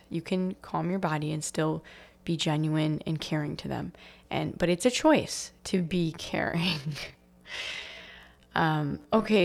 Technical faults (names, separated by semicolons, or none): time-stretched section